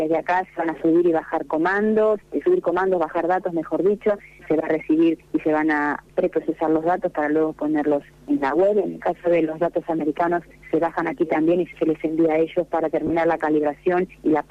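At 13.07 to 13.10 s there are lost LE Audio frames. A 30 ms gap is filled with a noisy smear, which fits three 10 ms LC3 frames being concealed.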